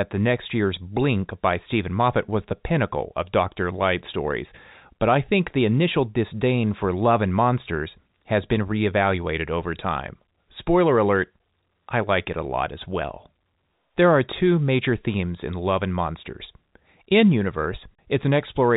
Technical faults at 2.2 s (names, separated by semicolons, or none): none